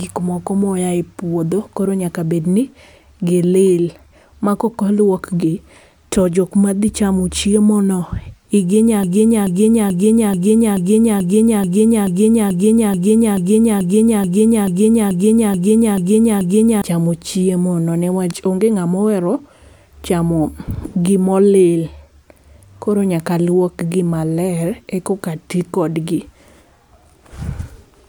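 At 9.03 s something upstream, likely the player, encoder or stream, stalled and kept re-sending the last fragment of speech it held, producing a broken-record loop that lasts until 16.82 s. A slice about 0.43 s long plays back to back 18 times, each repeat identical, giving a rigid stuttering rhythm in place of continuing speech. Whatever should have been heard across those nearly eight seconds is gone, and the clip resumes abruptly after the loop.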